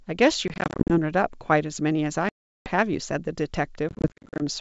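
Packet loss on an ADPCM call strikes at 0.48–0.99 s (230 ms lost in short gaps up to 40 ms), 2.29–2.70 s (370 ms), and 3.89–4.42 s (300 ms, gaps up to 50 ms). The waveform shows hard-edged flat holes and the spectrogram blank vertical slabs. Each return comes back with brief distortion while the decoder's predictor and step size resynchronise.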